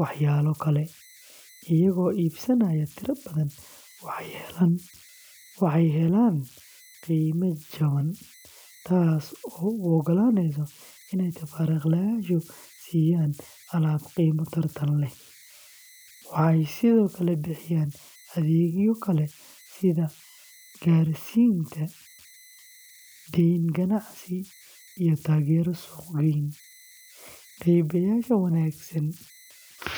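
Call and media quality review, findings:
Converter idle tones, throughout the speech. Faint whistle around 2 kHz in pauses, grainy noise under quiet passages, about 28 dB below signal. Probable component: delta-sigma converter running without dither. Small input locks modulator into repeating bit patterns; pitch set by input offset.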